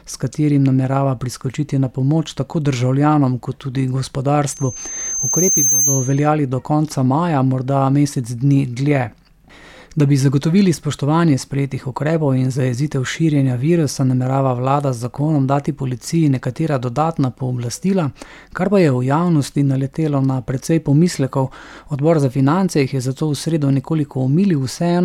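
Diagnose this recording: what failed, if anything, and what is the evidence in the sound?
Loudspeaker feedback squeal in the analogue mic-to-speaker loop: loop gain above one at 6.3 kHz makes one spectrogram line swell over about a second, 4.50–6.28 s, to roughly programme level.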